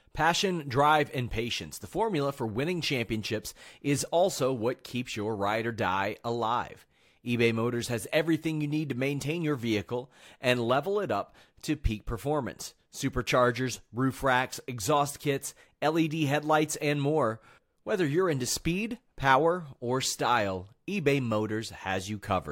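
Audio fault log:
Nothing stood out on listening to this speech recording.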